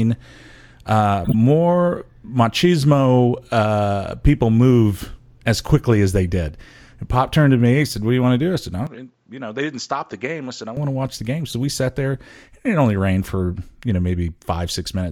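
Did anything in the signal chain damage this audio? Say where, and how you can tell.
Yes. At the codec stage, damaged compressed frames were decoded and played as if they were valid: corrupt frame decoded. Misread gains and codes throw energy to the wrong frequencies. This gives a loud burst spanning several frames from 1.24 to 1.34 s, and a quieter single-frame blip at 11.50 to 11.53 s.

At the capture stage, the input was likely switched to a poorer device from 8.87 to 10.77 s. The level drops by about 10 dB and the sound turns dull, with nothing above 7.5 kHz. The changeover has no gap, and a faint new noise floor sits well below the speech.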